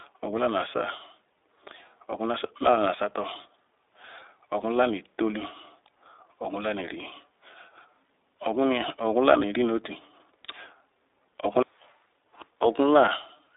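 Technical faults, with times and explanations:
Throughout, iLBC codec: the speech sounds thin and boxed in, with a plainly audible rough, slightly synthetic edge. Only about 300 Hz to 3.7 kHz comes through, and each 20 ms frame is coded independently, which fits iLBC's 15.2 kbps mode.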